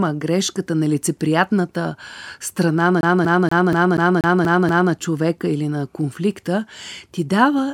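From 3.01 to 4.93 s, after "грешката нелицеприятната страна на", a CD stuck on one turn replays a 240 ms speech fragment eight times, muting at each jump, before "човека или на конфликта".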